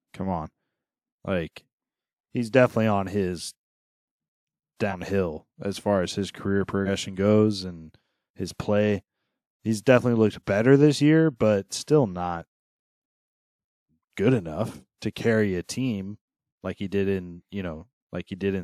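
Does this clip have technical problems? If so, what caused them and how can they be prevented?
Yes. At 4.90 to 4.95 s and again at 6.85 to 6.89 s the speech lurches forward, losing roughly a tenth of a second each time. These are compressed frames skipped: about two whole frames went missing or were rejected as damaged, which fits a codec frame of 46.4 ms. Prevent it by verifying file integrity after transfer and storing or streaming with error protection or checksums.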